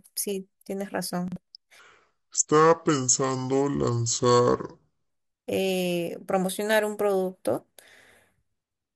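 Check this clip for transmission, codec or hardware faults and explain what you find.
Two faults are audible, both early in the speech.

From 1.28 to 1.36 s there are chunks out of order. A 40 ms block of audio arrives one chunk late and plays after the block that should follow it. Nothing is missing, but the sequence is swapped, which leaves three hard joins in that short span. The result is a brief jumbled stutter in the speech.

From 1.79 to 5.10 s there is a section at the wrong speed. It plays at 0.651 times its proper rate, so the speech is slowed and dragged, and pitch falls with it by roughly seven semitones, giving a deep, sluggish sound. Speed and pitch snap back together at 5.10 s. The likely cause is that this section was played or resampled against the wrong clock, stretching it in time without any pitch correction.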